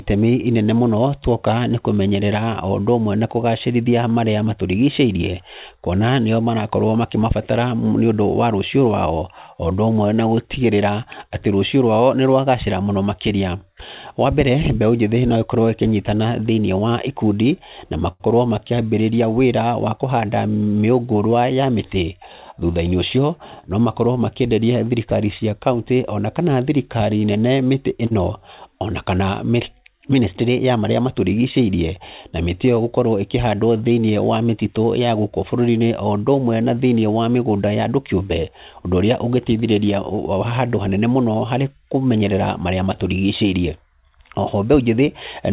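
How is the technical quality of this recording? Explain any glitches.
The recording has the narrowband sound of a telephone call, with nothing above 4 kHz, which fits a G.711-style call codec. Two brief holds and two brief rushes can be heard in the speech.

Short stalls from a late packet: at 18.12 to 18.22 s and 28.06 to 28.13 s, a sound hangs on unnaturally, for 77 ms and then 43 ms. A packet arrived late, the jitter buffer ran dry, and the receiver stretched the last sound until the packet came, then resumed from the same point.

Jitter buffer speed-up: from 20.17 to 20.86 s the speech runs about 10% fast, and from 30.09 to 30.73 s about 8% fast, sounding briefly hurried at unchanged pitch. After the stalls, the buffer held extra audio, so the receiver trimmed small pitch-period slices to catch back up.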